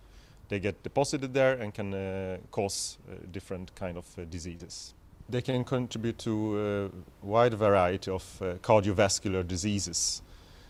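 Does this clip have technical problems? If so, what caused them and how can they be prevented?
Yes. At 4.57 to 4.61 s there is short concealed packet loss: about 20 ms of audio never reached the decoder, so the receiver invented roughly 21 ms by extending the preceding sound before blending back. This is heard as a brief smear or wobble. Better network quality of service and forward error correction would prevent it.

At 5.51 to 5.55 s there is a short stall from a late packet: the jitter buffer ran dry, and the receiver stretched the last sound for about 23 ms until the delayed packet arrived. Nothing is lost, but that moment is held slightly too long. A deeper adaptive jitter buffer would prevent it.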